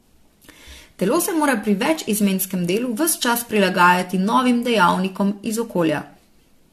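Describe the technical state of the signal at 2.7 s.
At 2.7 s you're right in the middle of generation loss, which runs through the whole speech clip. The audio sounds swirly, hollow and smeared, with consonant attacks blurred, and there's nothing above 14 kHz. It has likely been through around seven rounds of lossy decoding and re-encoding, each one quantising again on a shifted frame grid so the noise and spectral holes pile up. The character fits something like AAC-LC at 64 kbit/s, but worn down more than that bitrate alone would explain.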